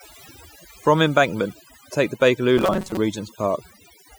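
Across the whole clip the speech carries overdone noise removal. The noise reduction was set too aggressively, so individual frequency bands close to its noise estimate were pulled far down or cut out entirely, taking quiet parts of the speech with them. The background drops, broken by twinkling, chirpy specks.

From 2.57 s to 2.97 s, right after "take the", the speech collapses into a stiff, metallic buzz fixed at 188 Hz that still loosely tracks the syllables. The likely cause is robotic sound from repeated short buffers: when fresh audio arrives too late, the playback loops its most recent short block, here about half of the stretch, and skips the real material. A 188 Hz buzz matches a repeat length of roughly 5.3 ms.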